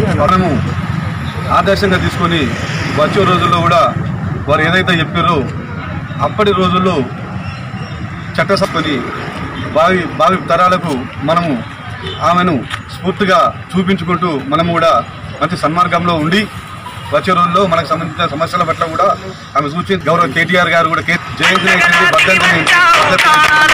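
From start to finish, the loud moments break into a harsh fuzz. This is hard clipping. The signal was driven about 14 dB past what one stage could pass, so every peak was sliced flat. Those square tops add harmonics high in the spectrum. Only a few percent of the samples hit the ceiling. But they sit on every strong peak, so each loud burst crackles and rasps rather than sounding clean.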